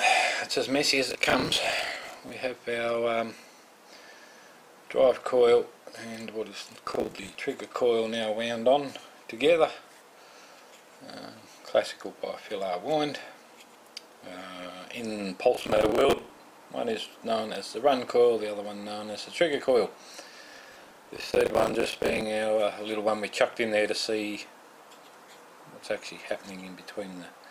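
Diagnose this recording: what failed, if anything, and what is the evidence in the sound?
The driver and buffer stage failed: the processor missed dozens of short buffer deadlines in a row, which fits buffers of around 10 ms. The result is processor overload crackle at 1.1–2.3 s, 6.85–7.35 s, 15.55–16.38 s and 20.46–22.21 s, where stale audio replays with hard edges as gritty tearing.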